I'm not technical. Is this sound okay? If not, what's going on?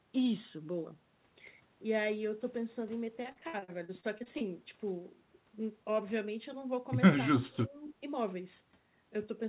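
No. There are two separate problems.

From 3.32 to 4.44 s the speech turns choppy and robotic. This is repeated packet loss: pieces of the audio went missing in transit eleven times in about a second, and each hole was patched by stretching the sound just before it. The longest hole lasts about 58 ms, and roughly a quarter of that stretch is patched sound. A single dropout would be one brief gap. Here the gaps come back to back, which produces the choppy, robotic texture.

From 7.30 to 8.02 s the speech fades down and partly drops away for about half a second in total, then recovers. This is speech suppressed in double talk, likely caused by the echo canceller mistaking this talker for echo while the other side was also speaking, and turning the sound down. Unlike the packet loss, nothing sounds robotic. The speech simply gets quieter, like someone briefly pulling the volume down.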